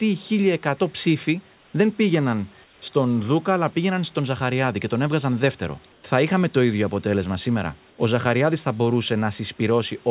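At 1.54–1.74 s, 2.64–2.82 s, 5.92–6.04 s (after "και τον έβγαζαν δεύτερο") and 7.90–7.98 s (after "το ίδιο αποτέλεσμα σήμερα"), the room background turns into a flat, featureless hiss about 3 to 4 dB quieter. This is comfort noise in place of the background, likely from discontinuous transmission in the sender.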